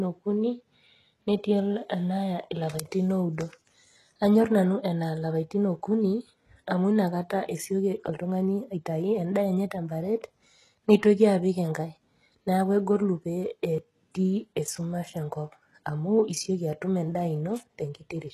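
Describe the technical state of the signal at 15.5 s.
At 15.5 s the speech is still passing through what is likely HE-AAC compression at a rate fitting about 16 kbps, running throughout. The top is rebuilt from copied lower bands, nothing reaches above 12.3 kHz, and sibilants come out gritty and metallic.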